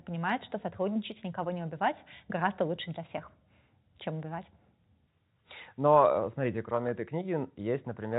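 Nothing in this speech recording stood out as a technical problem on listening.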